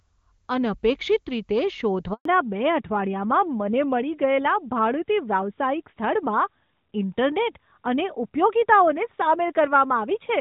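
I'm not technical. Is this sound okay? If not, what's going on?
No. Three things are wrong.

From start to finish there is channel delay (comb filtering). One side of the recording runs a tiny fraction of a millisecond behind the other, and when the two are mixed they cancel each other in the highest treble, from about 7 kHz. That gives the sound a hollow, phasey quality. Because the effect is fixed and never changes, it is unlike a phone-line dropout.

At 2.13 s there is a handover gap. The phone switched networks, and for about 120 ms, until 2.25 s, no speech got through. The voice fades quickly into true silence. That sets it apart from a glitch or a crackle.

From 2.25 s to the end there is a fallback to narrowband. The call dropped out of HD Voice into an older, lower-quality phone mode, and everything above 4 kHz disappears. The voice sounds muffled and rougher, like an old landline. 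Unlike the treble loss heard from the start, this change is sudden. Before it, the HD Voice sound was clear.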